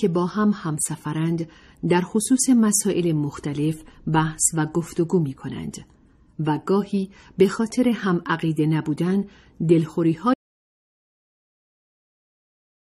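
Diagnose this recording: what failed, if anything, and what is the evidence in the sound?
Audio dropout to silence at 10.34 s: the sound stops dead and stays silent to the end, no room tone. Likely a lost input upstream, with the recorder still writing.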